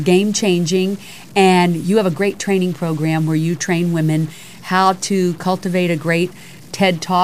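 From start to finish the speech carries a harsh, buzzy distortion, and the pauses are filled with noise. The likely cause is a stuck bit, one data bit held at a fixed value, offsetting roughly half the samples by that step of around -35 dBFS.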